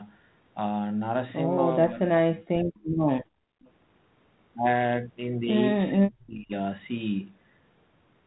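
Speech on a call, with the talker's voice sinking twice, from 1.82 to 2.81 s and from 5.92 to 6.52 s. Each time it dips, losing close to three quarters of a second in total and falling by roughly 35 to 40 dB at its deepest. This is speech suppressed in double talk. The other side was most likely speaking at the same moment, and the echo canceller, unable to tell this talker apart from its own loudspeaker echo, turned everything down together. Between 3.28 and 3.61 s the room sound itself drops away by about 36 dB for around a third of a second and then returns. That is background gated by the echo canceller: while the far end played through the loudspeaker, the canceller clamped the microphone hard, and the ambience came back only when it released. Right after the gate opens, from 3.61 to 3.70 s, a brief, very faint delayed copy of the voice slips through, trailing the original by 425 ms and sitting far below the speech, on the order of 35 dB down. 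This is an echo leak, likely from a loudspeaker on one end whose canceller did not fully remove what its microphone picked up, so a scrap of the returned signal was sent back down the line.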